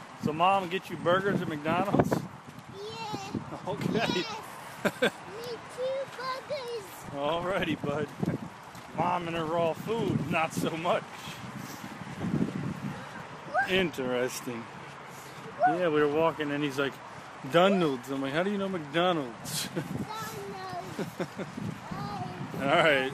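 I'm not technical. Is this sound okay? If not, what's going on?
No, it has two problems. Throughout, it sounds dull and gurgly, with a grainy roughness. That is MP2 compression, likely from squeezing the audio too hard. The high, bright parts get switched off, and what remains sounds coarse.

There is also DAB burbling, a noise of short blips and sudden jumps. It happens from 6.96 to 7.93 s, 9.15 to 9.47 s, 13.70 to 14.05 s, and 21.74 to 22.13 s. Weak digital radio reception corrupts the data, so parts of the sound jump briefly.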